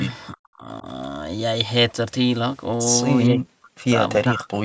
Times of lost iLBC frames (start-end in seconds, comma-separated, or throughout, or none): none